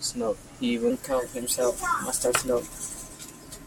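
A section at the wrong speed runs from 0.90 s to the end of this speech clip, where playback jumps to 1.12 times speed, raising pitch by roughly two semitones, likely from a clock mismatch.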